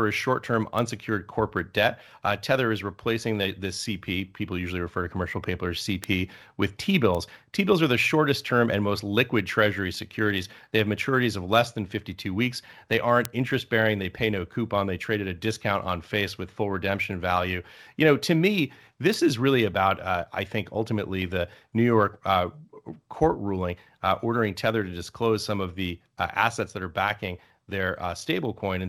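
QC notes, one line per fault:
0.79, 6.04, 7.15, 13.25 and 19.14 s, bit error spike: five isolated sharp ticks, peaking at about -14, -8, -14, -2 and -8 dBFS. Each is one sample (two at 6.04 s) jumping by a power of two from a flipped bit and snapping back, so it clicks broadband regardless of the speech.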